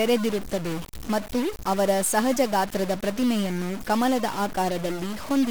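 From start to finish, one data bit in the sample values is likely stuck at a fixed 0 or 1, as happens with a broken data line or a faulty converter. Whenever the true sample should have that bit set the other way, the value is pushed off by the bit's weight, so the error follows the waveform itself. The speech carries distortion, and the pauses between phrases fill with noise instead of falling silent.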